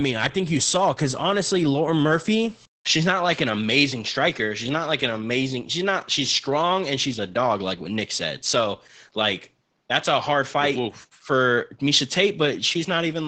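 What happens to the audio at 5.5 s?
At 5.5 s the speech is inside a span that begins at 2.66 s and runs to the end of the clip. The sound there is consistent with the input switched to a poorer device. A 200 ms silence at 2.66 s marks the switch. After it, nothing is heard above 7.6 kHz, so the speech sounds duller. A faint new background noise sits well below the speech. The level barely changes. The likely cause is the system moving its input to another microphone with a narrower band.

Opus voice compression is also present at 5.5 s, as it is everywhere in the clip. At 12 kbps the SILK coder keeps a wideband channel. It models speech with linear prediction in 20 ms frames and codes the excitation coarsely. The damage is plainly audible: the speech is muffled, hoarse and slightly robotic.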